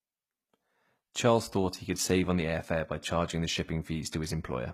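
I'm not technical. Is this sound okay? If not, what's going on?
No. Throughout the speech, the s sounds and the upper treble come across gritty and metallic, and nothing rings above about 15 kHz. This is likely HE-AAC compression, which rebuilds the treble by copying lower sounds upward. Unlike plain muffling, the brightness remains but sounds artificial.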